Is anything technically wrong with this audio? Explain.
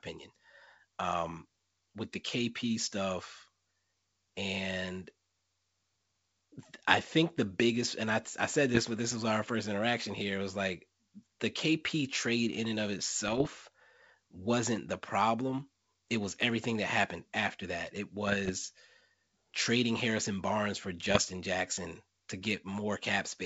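Yes, there are bit errors on an ADPCM link, in four spots: 8.74 to 8.80 s, between "and I I said" and "but this was our"; 13.28 to 13.47 s, right after "trade in and of"; 18.27 to 18.51 s; and 21.08 to 21.18 s. A few flipped bits, well under one percent, knock the decoder's step size and predictor off track, so each hit smears into pops, rough crackly bursts and quick level jumps over the G.722 wideband sound.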